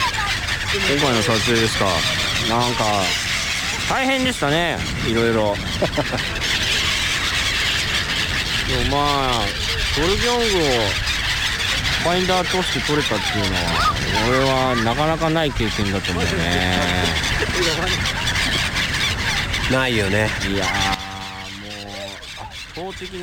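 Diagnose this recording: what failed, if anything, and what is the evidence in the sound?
At 20.94 s the level drops by about 12 dB in a single step and stays down until the clip ends at 23.22 s. It is a sudden gain jump: sound and background noise fall together at the same instant, with no fade, so the change happened in the digital signal path rather than at the source. The cause is likely a digital gain setting applied without a ramp, or a two-bit shift during sample-format conversion, since 12 dB matches two bits.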